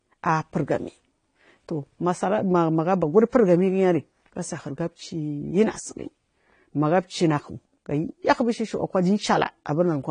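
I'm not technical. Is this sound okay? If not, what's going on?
No. The speech sounds dull and smeared from start to finish, with a fizzy, warbling edge on hissy sounds. Nothing is heard above 9.6 kHz. This is likely AAC compression set too low, throwing away fine detail to save space.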